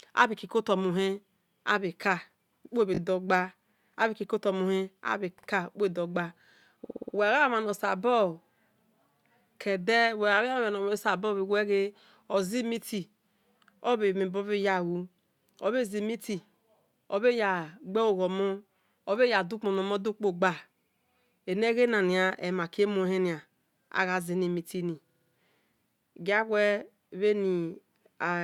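Repeated frames stutter the speech at 2.94 s, just before "gba abhe", and at 5.38, 6.84 and 25.09 s. Blocks of 20 to 60 ms replay up to five extra times. A spectrogram shows identical tiled slices, and the waveform shows copied segments.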